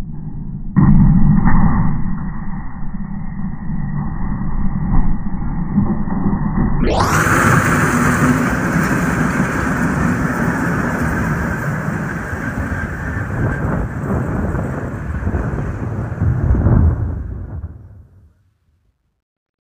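Truncation distortion on a fade runs from 16.86 s to the end at 19.73 s, during the fade-out that starts at around 17 s. The level stage keeps only 12 bits and adds no dither, so as the signal shrinks toward the smallest step, the waveform collapses into coarse square steps. From 18.26 s onward the tail turns gritty instead of thinning smoothly into silence.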